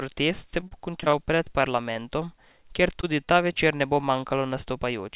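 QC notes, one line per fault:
0.32–1.97 s, repeated packet loss (robotic sound): eleven gaps of up to 32 ms, each patched by extending the previous sound, leave choppy speech with fragments missing.
3.01–3.05 s (before "tudi ta"), 3.25–3.29 s (after "kjer tudi"), 3.53–3.57 s (after "kjer tudi ta"), short concealed packet loss: roughly 20 ms holes are filled with continued sound, causing brief smears or wobbles.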